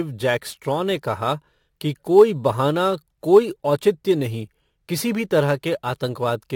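A gritty, inharmonic fizz rides on the speech throughout, tracking loud and bright sounds at roughly 30 dB below them. This is crude rate conversion: samples were simply repeated without filtering, a pattern that fits a step from 44.1 kHz to 48 kHz.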